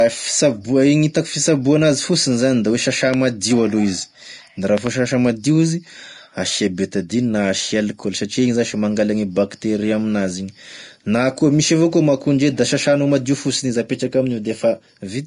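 Vorbis compression runs through the whole speech clip. Nothing is left above 10.6 kHz, and the treble is grainy and hissy with softened consonant onsets, which fits a low bitrate of around 36 kbps, where the codec likely traded fine detail for coarse noise.

A loud pop lands at 3.14 to 3.16 s, about 10 dB above the speech, followed by a double pop from 4.78 to 4.89 s at about 15 dB, likely voltage spikes from a connector or switch, heard as sharp clicks over continuing speech.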